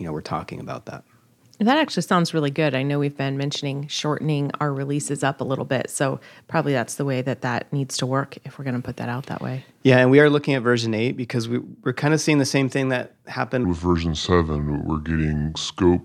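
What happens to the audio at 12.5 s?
Nothing goes wrong at 12.5 s; the speech carries on intact through that moment.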